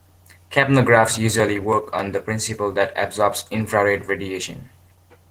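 Opus voice compression runs through the whole speech clip. The linear-prediction core codes the lower band with coarse excitation, and a thin transform layer carries the top. The result is a plainly hoarse, slightly robotic grain, which fits a bitrate around 16 kbps in hybrid mode.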